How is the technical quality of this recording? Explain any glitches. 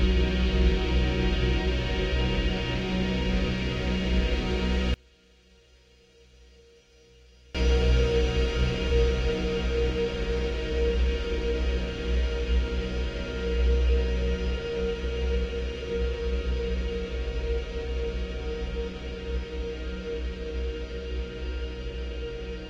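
The recording has one glitch. From 4.94 to 7.55 s the sound drops by about 33 dB to a faint remnant, likely one channel inverted, so the shared content cancels when the channels are summed to mono.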